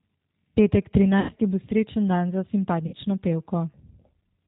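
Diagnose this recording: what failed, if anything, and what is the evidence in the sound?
The codec stage is at fault throughout: the audio carries the plainly audible roughness of G.729 coding. Everything above 4 kHz is missing, and the voice has the slightly buzzy, synthetic texture of a low-rate model that keeps only a vocal tract filter, a pitch predictor and a few pulses per frame. This fits an 8 kbit/s G.729A stream. Unlike a simple low-pass filter or resampling fault, the band limit comes with granular, modelled grain rather than clean dullness.

The network stage failed twice, with the speech decoder concealing lost packets. From 1.20 to 1.32 s, just before "bo srečen dan za", about 90 ms of audio is replaced by a stretched continuation of the preceding sound that fades. From 2.87 to 2.95 s, right after "bo srečen dan za", about 60 ms is handled the same way. These gap lengths point to roughly three and two packets lost. 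A plain dropout would leave silence or a click. Here the decoder fills the hole instead, and the sound stays weak briefly after packets resume.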